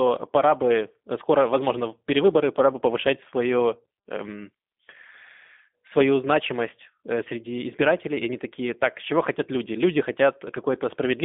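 Speech runs through the G.729 codec for the whole clip. The sound is confined to roughly 200 Hz to 3.6 kHz, so it is thin and muffled. The coding roughness is plainly audible, a slightly synthetic, buzzy texture that fits 8 kbit/s pulse-based speech coding.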